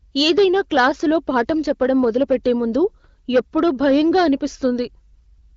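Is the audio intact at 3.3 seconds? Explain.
No, hard clipping runs through the whole clip, 3.3 s included. The speech is pushed about 8 dB past the limit, so a small share of peaks get sliced flat and crackle.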